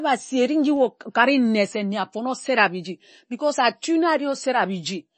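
From start to finish, the speech has plainly audible damage that is likely MP3 compression. Nothing is heard above about 8.3 kHz. The treble stops there like a wall, so s sounds lose their edge. Weak detail flickers in and out between frames. That gives a watery, swirling texture, with metallic chirps on sibilants and smeared consonant attacks. The degree of damage points to a starved encoder, which fits a low bitrate of around 32 kbps.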